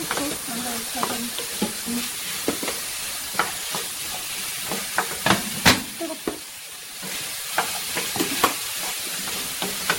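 From start to finish the recording carries generation loss: a swirly, smeared quality, hollow gaps in the spectrum, and softened attacks where transients should be crisp. Nothing is present above 16.6 kHz. The texture is worse than a single lossy pass would leave, which points to an MP3 chain at around 64 kbit/s, likely re-encoded roughly five times. Each pass re-quantised the audio on a shifted frame grid, so the noise and spectral holes accumulated.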